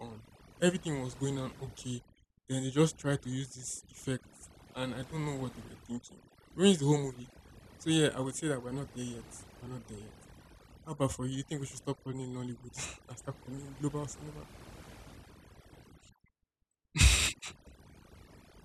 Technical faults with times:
0.00-18.65 overdone noise removal

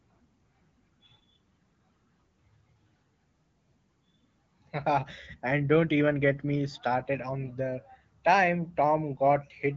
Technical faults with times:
none

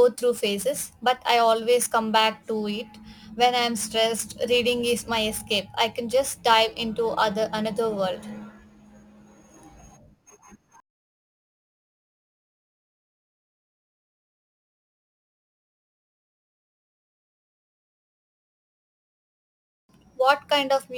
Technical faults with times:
0.00-20.98 crude rate conversion

